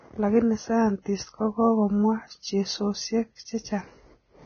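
Throughout the speech there is a hissy, grainy quality. The treble fizzes like noise in place of crisp detail, and consonant onsets sound smeared. This is likely Vorbis compression at heavy damage, consistent with a low bitrate near 17 kbps. The encoder drops everything above 6.5 kHz and quantises the remaining highs so coarsely that their detail is replaced by similar-energy noise. A spectrogram would show a hard ceiling at 6.5 kHz with speckled, blotchy upper bands.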